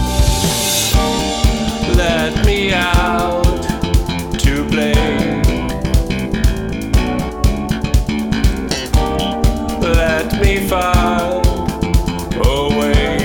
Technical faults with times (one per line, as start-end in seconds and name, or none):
none